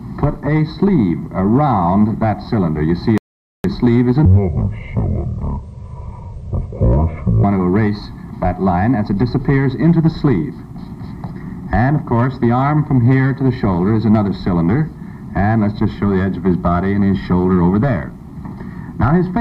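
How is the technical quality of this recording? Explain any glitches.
Two clear glitches affect the technical quality.

From 3.18 to 3.64 s there is a rebuffering stall. Playback ran out of downloaded audio and waited, adding 465 ms of silence. Unlike a dropout, the sound resumes exactly where it stopped, with nothing skipped, only delayed.

From 4.25 to 7.44 s a section plays at the wrong speed, at 0.543 times normal, likely from being fitted to the wrong clock. It sounds deep and slow, about ten semitones low. Unlike a pitch shift alone, tempo and pitch drop together.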